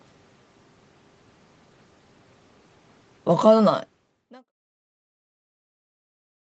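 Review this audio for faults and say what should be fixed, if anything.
Nothing needs fixing, as this audio shows no faults.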